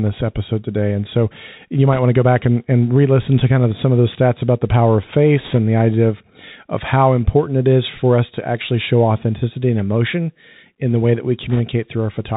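Speech, carried over a Bluetooth CVSD headset codec from start to finish. Everything above 4 kHz is missing, so the sound is narrow and boxy. The codec tracks the waveform one bit at a time with an adapting step, and the damage is plainly audible. Sharp, loud high sounds outrun that step and distort, s sounds come out scratchy, and a fine granular hiss sits underneath. The character fits a 64 kbps CVSD link.

Three short bursts of bit errors on a Bluetooth voice link break through. The first is at 1.93 to 1.99 s, after "today and so you" and before "want to go back". The second is at 5.39 to 5.58 s, after "about the power of" and before "the idea of of". The third is at 11.50 to 11.60 s, after "the way that we". Each sounds like a brief rushing crackle over the speech, not a loud click. In CVSD every bit carries the same small weight, and a flipped bit's effect fades quickly. The error rate sounds like roughly 1 to 2 percent. 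The middle burst is the longest.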